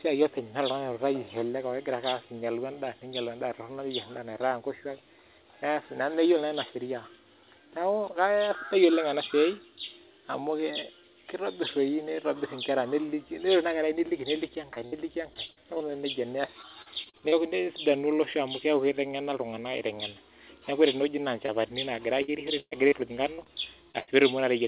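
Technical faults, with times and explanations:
14.74–15.82 s, 16.46–17.34 s and 22.22–24.12 s: repeated packet loss (robotic sound). Holes come one after another, each patched by extending the previous sound, so about a fifth of each stretch is synthetic. That gives a choppy texture with pieces missing rather than one blip. The longest holes are 62 ms, 38 ms and 116 ms.
21.46–21.50 s: short concealed packet loss. A single hole of about 20 ms is filled by continuing the preceding sound and then blended back. It is heard as one brief smear or wobble, an isolated event, not the sustained robotic chop of the runs.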